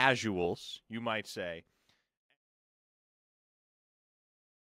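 A gain setting was most likely applied without a ramp at 0.55 s, dropping the digital level by about 8 dB from one sample to the next and holding it there to the end. The result is a sudden gain jump: the speech and its background noise fall together in a single step rather than easing down. The later fade-out, beginning around 1.5 s and finishing at 2.38 s, starts from this already reduced level.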